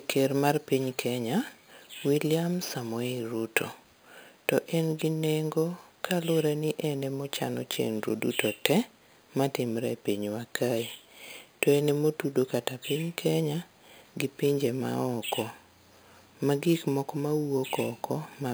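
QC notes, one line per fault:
Throughout, imaging from sample-and-hold upsampling: the speech was raised from a rate that fits 11 kHz up to 44.1 kHz by just repeating each sample, with no smoothing filter afterwards. So mirror copies of the spectrum sit above the real content, the first one spanning roughly 5.5 to 11 kHz at about 18 dB below the speech. You hear it as a metallic fizz that rises and falls with the speech, and that lowest copy moves against the pitch.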